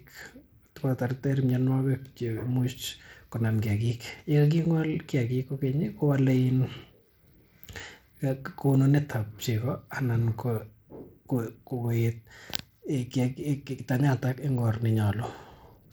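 From start to finish the speech sounds gritty and thin: the treble keeps dropping out and flickering back, and a coarse, grainy noise with aliasing rides along on the sound. This points to Bluetooth SBC compression, most likely at a low setting, which fits a rate of roughly 96 kbps. With so few bits to share, the codec's upper sub-bands get little or nothing, and the remaining bands are quantised coarsely, leaving plainly audible damage.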